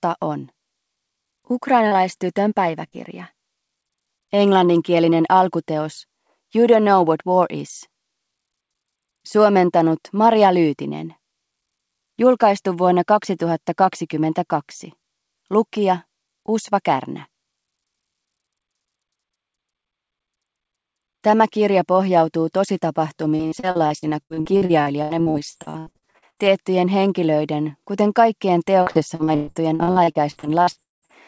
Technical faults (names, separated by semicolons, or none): short concealed packet loss; repeated packet loss (robotic sound)